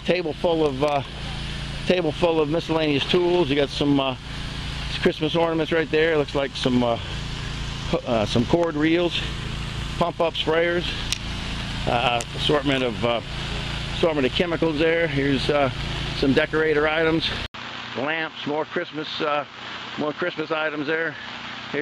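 At 17.46 s the sound drops out for 80 ms, then returns duller and a few decibels quieter, with nothing above 7.6 kHz and a new background noise sitting roughly 30 dB under the signal until the end at 21.82 s. This is most likely an input switched to a poorer device. A simple filter or EQ change would narrow the band without the gap at the switch, the changed noise floor and the level step that come with new hardware.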